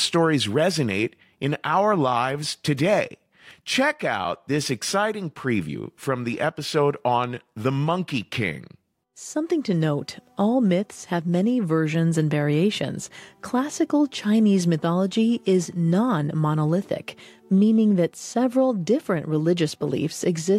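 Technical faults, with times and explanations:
No technical faults can be heard anywhere in the clip.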